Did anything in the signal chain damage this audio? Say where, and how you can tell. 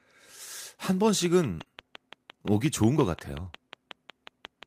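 Yes. A steady train of clicks ticks at about 5.7 per second from 1.09 s to the end, peaking about 10 dB above the sound, likely interference reaching the analogue wiring or converter.

At 1.59 s, roughly 20 ms turns briefly rougher and noisier without any gap. One lost network packet was rebuilt from the low-bitrate error-correction copy carried in the next packet.

From 1.63 to 1.67 s, a short smear replaces the real sound. This is short concealed packet loss: 20 ms never arrived, so the decoder extended the preceding sound to fill it.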